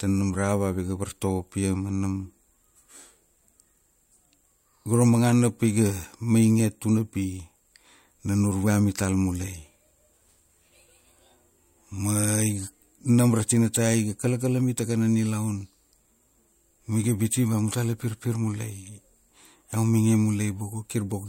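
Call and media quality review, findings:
No faults found in this call and media quality review.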